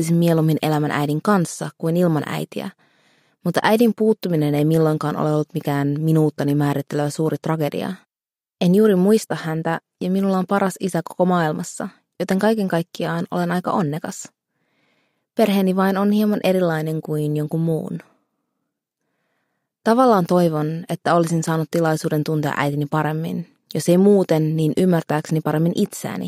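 Nothing is technically wrong with this audio.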